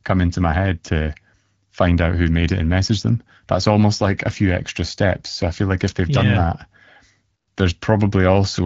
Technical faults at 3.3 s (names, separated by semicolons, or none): none